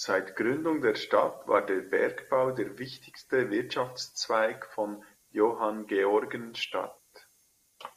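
No technical faults can be heard anywhere in the speech recording; the signal stays continuous and stable throughout.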